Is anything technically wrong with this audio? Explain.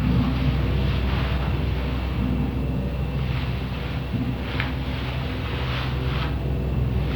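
No, nothing technically wrong stood out on listening to this recording of sounds.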